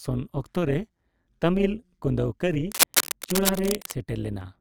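From start to end, the speech carries overlap-add ripple. The frames were rejoined with an overlap that does not sum to a steady gain. So the level swells and dips about 11 dB, around 150 times a second. It sounds like a metallic buzz, with extra tones around each note.

From 2.69 to 3.92 s, dense, uneven bursts of scratching noise sit over the speech, roughly as loud as the speech itself. This is cable scratch noise. The likely cause is a worn cable or connector being moved, so its contact resistance jumps rapidly.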